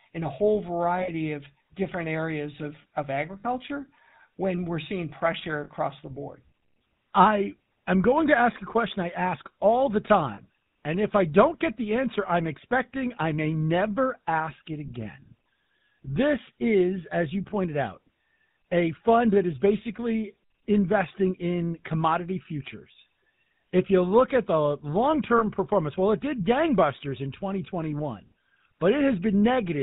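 From the start, the speech carries the buzzy, gravelly roughness of the GSM full-rate codec, which fits a 13 kbps stream. A vocal-tract model driven by sparse, regularly spaced pulses replaces the real excitation. On a spectrogram, nothing appears above 4 kHz, leaving a flat ceiling.

Lost GSM frames occur at 1.02 s (60 ms), 3.40 s (40 ms), 5.64 s after "when we're seeing pressure" (40 ms), 10.34 s after "I ask all the" (40 ms), and 25.38 s after "look at the long" (20 ms). Each gap was filled by repeating the last good frame, so the sound hangs briefly as a metallic ring. On a spectrogram, it shows as frozen horizontal bands.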